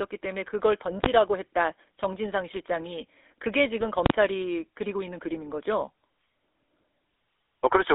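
Across the whole speech clip the sound is buzzy and gravelly, squeezed into a band from about 300 Hz to 3.6 kHz. That points to the GSM full-rate codec at 13 kbps, which rebuilds the voice from a vocal-tract filter driven by coarsely sampled pulse excitation.

At 1.04 to 1.06 s a single hard bang cuts through. This is invalid numbers at full scale: a calculation produced infinite or undefined values, and the output was pinned at one extreme value for a 20 ms block.

From 3.80 to 3.86 s the speech breaks into a gargling squawk. That is GSM bit errors, with flipped bits corrupting the decoder's filter, pitch or gain values. The spectrum bends and the level jumps, which fits two damaged frames.

At 4.06 to 4.10 s invalid numbers at full scale return over a longer 40 ms block. A loud pop sounds at each edge, with nothing audible in between.

From 5.78 to 5.82 s GSM bit errors strike again, giving another brief burst of squawking distortion where corrupted parameters spoil what looks like two more frames.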